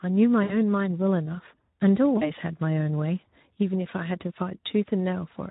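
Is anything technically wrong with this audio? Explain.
Yes. The Speex codec damage is audible throughout. Its hoarse, noisy CELP excitation, rather than watery swirling, suggests roughly 11 kbps.

VoIP packet loss concealed by the speech codec occurs at 0.43 to 0.55 s and 2.17 to 2.33 s, covering about 60 ms and 40 ms of lost audio. Each gap becomes a fading extrapolation of the voice rather than silence, and the speech stays weak briefly afterwards.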